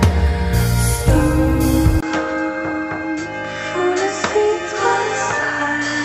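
At 2.01 s a brief gap of about 20 ms gives way to duller, slightly quieter sound, with nothing above 7.8 kHz and a new faint noise floor, most likely an input switched to a poorer device. The simultaneous shift in tone, level and noise sets it apart from a simple filter.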